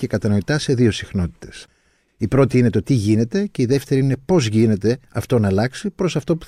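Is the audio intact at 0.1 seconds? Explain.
Yes, the speech at 0.1 seconds is intact, with no dropout, click, distortion or other fault at that moment.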